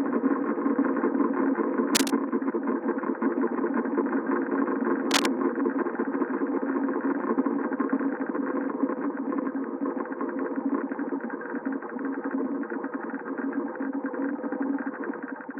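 At 1.95 to 2.10 s and 5.11 to 5.27 s, cable scratch noise brings brief scratchy rustling, first about level with the sound, then louder. A worn cable or connector was likely moved. Spectrograms show ragged broadband smears; waveforms show dense, uneven bursts.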